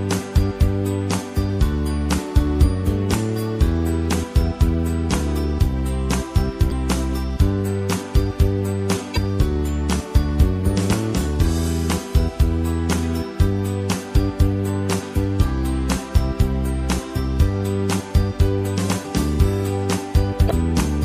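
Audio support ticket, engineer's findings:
Whole clip: watery, swirly sound, high end dull, attacks smeared. Likely MP3 compression at a low bitrate, consistent with roughly 64 kbps. Spectrogram: hard treble shelf at a fixed cutoff, upper bands flickering in isolated blocks frame to frame; transients spread on waveform.

Short chirp/blip bursts at 6.68–6.72 s, 9.14–9.17 s and 20.47–20.52 s, each about 40–50 ms. Damaged data in a compressed stream: decoder misreads corrupt frames, loses sync, jumps to next header. Spectrogram: brief broadband smear; waveform shows abrupt discontinuity.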